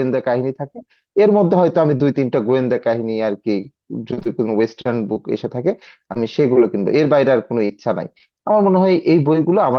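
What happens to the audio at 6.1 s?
At 6.14 to 6.17 s there is a short concealed packet loss: about 20 ms of the speech arrived too late for the decoder, and the receiver covered roughly 17 ms of it by extending the preceding sound before crossfading back. It comes across as a brief smear or wobble rather than silence. Unlike a plain dropout, there is no hard gap or click, just a momentary blur where detail is lost.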